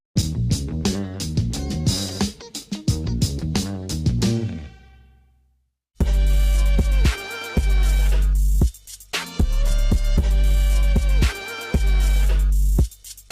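Nothing in this audio stands out as a technical fault. There are no audible breaks, added noise or unexpected changes to the sound at any point.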